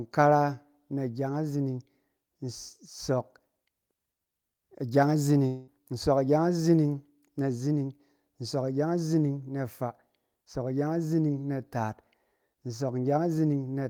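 At 5.47 s the speech breaks off and the last sound is stretched into a buzzy, fading hiss that lasts until about 5.69 s. The fill runs for roughly 200 ms and never reaches true silence before normal speech resumes. About 200 ms of the original audio is gone, so speech picks up further along with that stretch skipped. This is likely a long network dropout, where the receiver concealed the gap with synthetic continuation.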